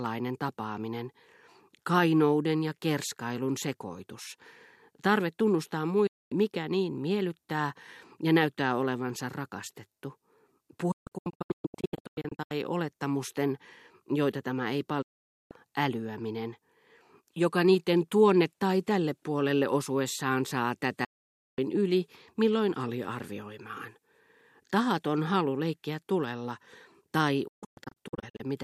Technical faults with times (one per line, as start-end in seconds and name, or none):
6.07-6.32 digital broadcast dropout
10.91-12.51 digital broadcast dropout
15.02-15.51 digital broadcast dropout
21.04-21.59 digital broadcast dropout
27.47-28.43 digital broadcast dropout